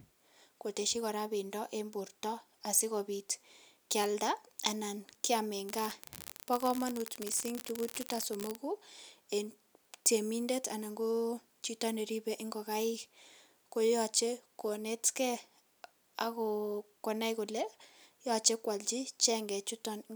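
An unreliable data bit corrupts this speech recording from 5.69 to 8.56 s: one marginal data line flips at random, so affected samples jump by a fixed step of about -20 dBFS, producing a steady crackling fizz that continues independently of the speech during that stretch.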